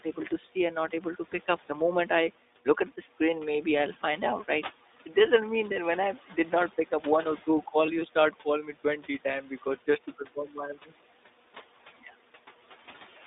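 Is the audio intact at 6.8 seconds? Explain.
No. At 6.8 s, as across the whole clip, noise suppressor artifacts are present. The suppressor pulls down bands it judges to be steady noise by about 11 dB, frame by frame, so the room noise, which sits about 20 dB below the speech, dips between phrases and swells beneath them. That pumping tracks the speech, unlike a gate, which would cut the noise cleanly to silence.

The iLBC codec is also audible there. The line passes only 250 Hz to 3.7 kHz, and each 20 ms frame's excitation is coded on its own, which fits the 15.2 kbps mode. The result is a dull, slightly rough, synthetic edge. A wideband codec would keep more top end, and plain low-pass filtering would not add the graininess.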